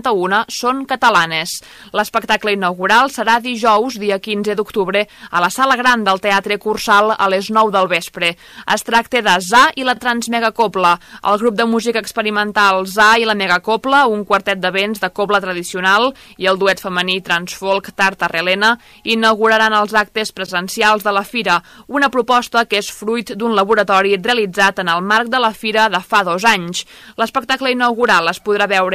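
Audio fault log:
Throughout, hard clipping: the signal reaches a stage about 12 dB hotter than it can pass, so every peak above the ceiling is sliced flat, affecting only a small fraction of samples, around one or two percent. Those squared-off tops generate harmonics reaching well up the spectrum, so each loud moment carries a harsh, gritty fuzz and crackle, while quieter passages stay below the limit and pass cleanly.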